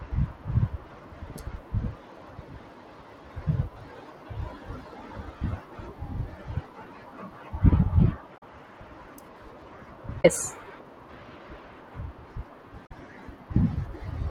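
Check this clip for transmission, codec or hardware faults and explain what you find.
The speech has three short faults, all damaged data in a compressed stream, at 8.34–8.43 s, 10.21–10.25 s and 12.83–12.91 s. Corrupted frames make the decoder misread and resync, giving brief chirps, squawks, clicks or short holes that appear as broadband smears or blocky bursts on a spectrogram.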